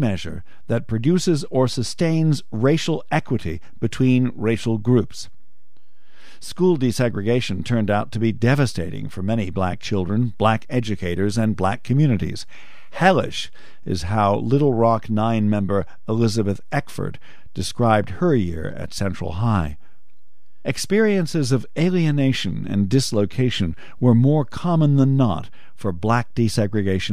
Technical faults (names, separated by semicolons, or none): DC offset